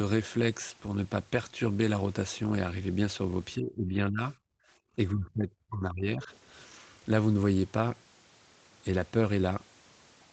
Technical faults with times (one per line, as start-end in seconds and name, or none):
3.56-4.35 speech suppressed in double talk
4.55-4.82 background gated by the echo canceller
4.96-6.31 speech suppressed in double talk